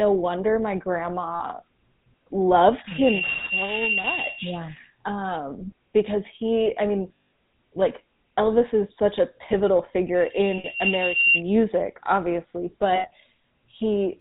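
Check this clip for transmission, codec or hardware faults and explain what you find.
Three faults are present: GSM full-rate codec damage throughout, five lost GSM frame events, and two bouts of loudspeaker feedback squeal.

The GSM full-rate codec is audible for the whole clip as a buzzy, gravelly roughness with nothing above 4 kHz, which fits the 13 kbps full-rate coder. It models the vocal tract, then rebuilds the excitation from regularly spaced pulses that keep only every third sample. That coarse excitation produces the buzz.

Lost GSM frames occur at 1.34–1.42 s, 4.02–4.06 s, 7.18–7.24 s, 10.58–10.67 s and 12.96–13.08 s, with gaps of roughly 60, 20, 180, 60 and 80 ms. The decoder repeats the last good frame's parameters, so the sound is held as a rough, metallic ring rather than dropping out cleanly.

Loudspeaker feedback squeal runs from 2.87 to 4.59 s and from 10.15 to 11.43 s, as a single 2.8 kHz tone. 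It swells over roughly 0.4 s the first time and about a second the second time, reaching about 5 dB above the speech. A microphone was picking up its own loudspeaker, and the loop gain exceeded one at that frequency.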